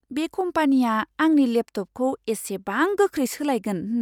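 No technical faults can be heard anywhere in this speech recording. Nothing in the sound points to a problem in how it was captured or delivered.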